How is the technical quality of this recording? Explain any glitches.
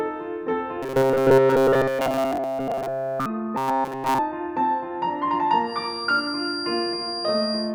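The recording has two clear technical problems: a robotic buzz in the first half and a feedback whistle near the end.

From 0.83 to 3.26 s, and again from 3.58 to 4.19 s, the music turns into a rigid, metallic drone, the robotic sound from repeated short buffers. The likely cause is playback being starved of new audio and looping its last fragment, so nearly everything heard in those stretches is repetition. The fixed 133 Hz buzz fits a repeated slice about 7.5 ms long. Unlike a plain dropout or crackle, the sound never goes silent. It keeps the music's rough outline under an imposed, unchanging pitch.

From 5.61 s to the end, a thin, steady tone sits about 10 dB below the music at 4.8 kHz, swelling and fading slowly in level. This is a feedback whistle, likely from a speaker-to-microphone loop held just at the edge of feedback, so one frequency rings on without building up. Unlike full runaway feedback, it never swells into a howl. 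Unlike a constant electrical tone or hum, it is high-pitched and not perfectly steady.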